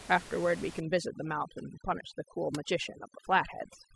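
From 0.8 s to the end, overdone noise removal strips bands near the room-noise floor, about 16 dB below speech, leaving twinkling specks.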